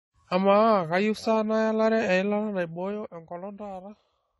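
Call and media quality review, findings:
Dull, smeared speech with a fizzy, warbling edge on sibilants throughout; nothing above 11.5 kHz. Likely AAC compression (AAC-LC) at a low bitrate, which fits roughly 32 kbps: quantisation strips high bands and leaves spectral holes.

Ticking, zipper-like roughness from 2.40 to 3.26 s while the level falls by about 10 dB. Zipper noise from the gain stage: level stepped in 2 dB increments, around seven steps a second, unsmoothed, each step clicking.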